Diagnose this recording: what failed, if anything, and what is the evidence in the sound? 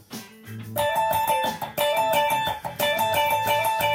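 Clock slip clicks run from 0.19 s to 3.88 s: about twenty faint, evenly spaced ticks, roughly one every fifth of a second. That steady rhythm is the evidence. The likely cause sits at the converter stage, where two devices run on independent clocks with nothing to lock them together. A mismatch on the order of 150 ppm adds up to a whole sample about every 0.2 s, and each tick fits a single sample being dropped or repeated.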